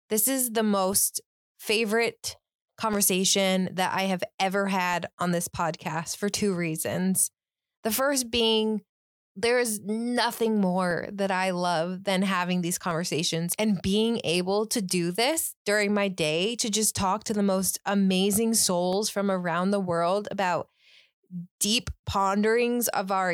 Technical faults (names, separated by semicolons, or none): periodic USB or driver dropouts